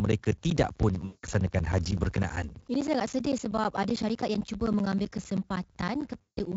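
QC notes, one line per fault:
0.05 to 6.53 s, periodic USB or driver dropouts: the signal cuts to silence every 64 ms, roughly 10 ms each time, about a hundred gaps in all. The evenly spaced losses come from something stalling the audio path on a fixed schedule, heard as a steady ticking under the speech.
1.05 to 1.26 s and 6.21 to 6.40 s, VoIP packet loss concealed by the speech codec: stretches of about 180 ms and 160 ms went missing, and the decoder filled them by carrying its last pitch and filter forward at falling gain, giving a buzzy, fading smear rather than clean speech, with the Speex coding at 34 kbps showing little damage of its own.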